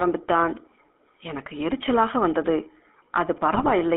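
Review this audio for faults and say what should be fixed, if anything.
GSM full-rate codec throughout: speech is confined to 200 Hz–3.4 kHz and has a buzzy, gravelly roughness from pulse-driven excitation. This fits 13 kbps GSM, unlike simple band-limiting, which stays smooth. Prevent it by routing calls over a wideband or modern codec path instead of legacy GSM.

GSM bit errors from 3.54 to 3.71 s: corrupted filter, pitch and gain values produce squawks, pops and gargling. Unlike packet-loss concealment, the level and spectrum jump erratically rather than fading or repeating. Prevent it by improving radio link quality or strengthening error protection so corrupted frames never reach the decoder.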